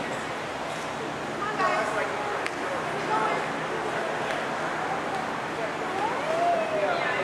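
No technical faults are audible anywhere in this recording.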